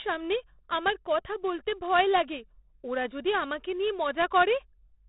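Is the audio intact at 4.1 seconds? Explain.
No. At 4.1 seconds the speech carries 4-bit ADPCM compression, which runs through the whole clip rather than appearing as a separate event there. Each sample is coded as a small 4-bit step from a predicted value, and the step size adapts as it goes, so a gritty hiss rides on every loud syllable and sharp onsets distort. The damage is heavy. With nothing above 3.8 kHz the sound is also dulled, which points to roughly 32 kbps.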